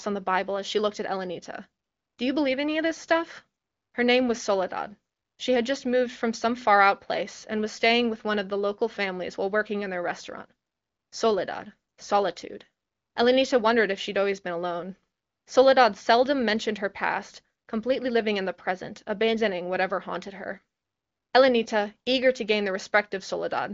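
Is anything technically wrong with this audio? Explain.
No, the speech comes through the AMR wideband (HD Voice) codec at 23.05 kbit/s with its expected band limit, nothing above about 7.5 kHz, and no faults can be heard.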